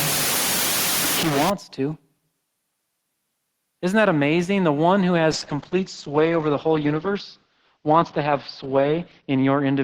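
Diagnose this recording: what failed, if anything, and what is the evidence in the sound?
The first fault sits in the sample-format conversion stage. From 0.0 to 1.5 s the speech is harsh and grainy, and the error is roughly as loud as the speech itself. The grit tracks the signal. This is likely low bit depth without dither, with samples truncated to about 3 bits.

The second fault is a call bitrate drop in the codec stage. Right after "one who", at 5.33 s, the speech turns rough and muffled until 9.84 s. The top end falls from 20 kHz to 6 kHz. This fits the encoder dropping from about 32 to 8 kbps, holding at its lowest for 3.94 s.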